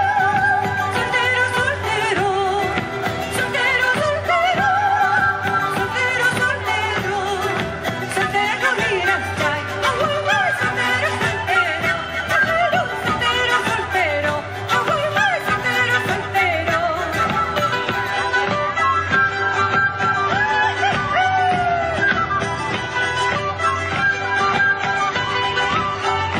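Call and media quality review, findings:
Adaptive stream at a lower bitrate, 18.11 s to end (26.4 s). Abrupt, gapless loss of top end, nothing above 10 kHz, codec artefacts rise. Player switched rendition when throughput fell; fits AAC-LC dropping from about 96 to 24 kbit/s.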